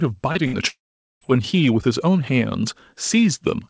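At 0.32 to 0.38 s there is a short concealed packet loss: about 30 ms of the stream never reached the decoder, and the receiver covered the hole with 28 ms of continuation built from the preceding sound before blending back into real audio. It comes across as a brief smear or wobble rather than a gap. It is much shorter than the events that follow, and it has no audible fade, which separates it from a burst.

From 0.47 to 0.56 s comes a burst of packet loss. About 60 ms went missing in a row, and the concealer stretched the last sound for 63 ms while turning it down. The result is a held, fading tail, and the sound then picks up further along with that stretch skipped. The decaying tail and the jump in continuity set it apart from the earlier smear-like patch. It is still too short to reach silence.

The longest event runs from 0.68 to 1.24 s and is heard as a long network dropout, likely caused by audio simply ceasing to arrive for over half a second. 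About 540 ms is missing. The last sound is carried on and fades away, and then roughly 450 ms of near silence follows before the stream returns further on. That empty stretch after the fade distinguishes it from a burst of loss, where the sound resumes before dying out. Throughout, the band stops at 8 kHz, which fits a wideband codec such as G.722.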